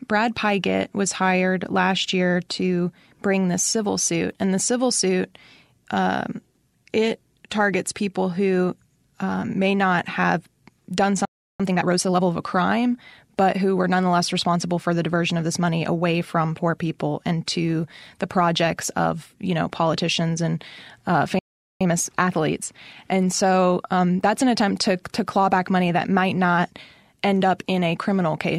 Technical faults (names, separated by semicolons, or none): playback stall; time-compressed catch-up